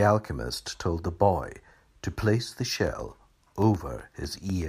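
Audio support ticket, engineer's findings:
Periodic USB or driver dropouts from 2.75 to 4.62 s. Regular ticks every 0.125 s, about fifteen in all, heard over the speech. Each is roughly a millisecond of signal replaced by silence. A background task likely stalls the USB bus or audio driver.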